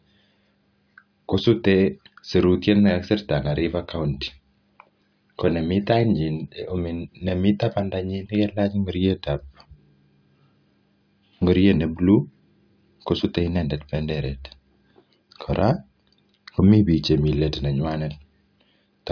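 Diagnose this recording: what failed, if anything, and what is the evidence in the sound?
Nothing failed in this speech recording. No stage from capture through playback leaves any audible evidence of a fault.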